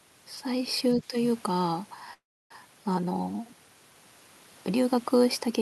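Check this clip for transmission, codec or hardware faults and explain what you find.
Two faults stand out in this speech clip, one from the echo canceller and one from the network path.

Speech suppressed in double talk, 0.94 to 1.14 s: for about 200 ms the talker's level sinks by roughly 10 dB. This is likely the echo canceller reacting to both ends talking at once. Unable to separate the near talker from the loudspeaker echo, it attenuated everything it heard, the wanted speech included.

Call audio freeze, 2.13 to 2.52 s: the sound stalls for 370 ms. The last sound trails on briefly, then about 300 ms of silence follows before speech resumes exactly where it stopped, with nothing lost. The likely cause is delayed packets draining the jitter buffer. The receiver padded the gap, and everything after it now plays about 370 ms later than before.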